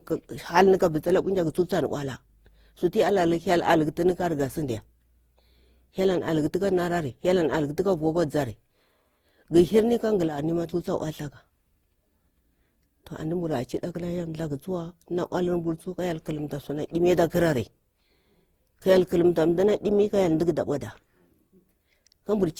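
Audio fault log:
throughout, generation loss: hollow, swirly speech with smeared, blurred attacks, likely from around seven successive Opus encodes near 48 kbit/s, each pass adding fresh quantisation noise.
10.28–10.38 s, one channel drops out: the level abruptly falls by about 6 dB for about 0.1 s, likely because one stereo channel vanished before the mono sum.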